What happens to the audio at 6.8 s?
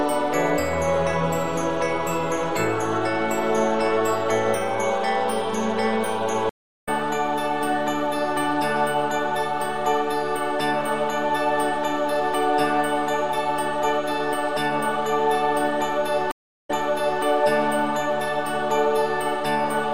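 At 6.8 s the audio is in a dropout. It goes silent at 6.49 s, stays silent for about 0.37 s, and comes back at 6.89 s roughly 0.3 s further along, so a short stretch of the sound is simply missing. This is a stream reconnect: the connection broke, the player went quiet while it re-established the link, then started a fresh decoder mid-stream and picked up at a later point.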